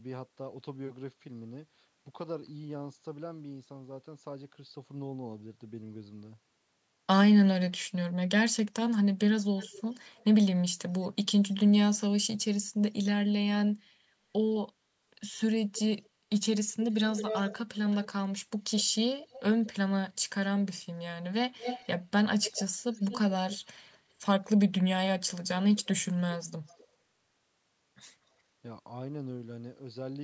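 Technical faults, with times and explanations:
9.57–10.25, 11.02–11.54, 16.91–18.08, 18.78–19.71, 21.59–21.87, 22.41–24.47, 25.77–25.88 and 26.67–26.86 s: echo leak. A delayed copy of the speech trails it, ranging from barely audible to fairly loud, its lag drifting from 201 to 235 ms. The likely cause is the far side's echo canceller passing back what its microphone heard from its loudspeaker.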